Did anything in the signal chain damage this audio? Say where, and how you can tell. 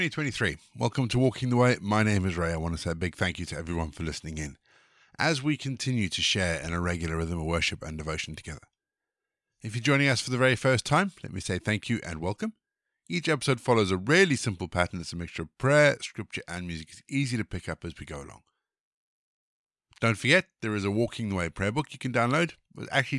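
No, nothing in this speech recording points to damage anywhere along the chain, so there's no stage to single out here.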